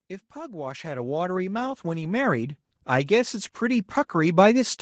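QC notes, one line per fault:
0.33–4.8 s, automatic gain rising: the automatic gain control judged the incoming speech too quiet and kept lifting its gain, so the voice and the background noise beneath it swell together by about 18 dB across more than four seconds rather than jumping at once. The slow, steady climb is the controller easing toward its target level, while the call path's band limit holds everything at 8 kHz and below.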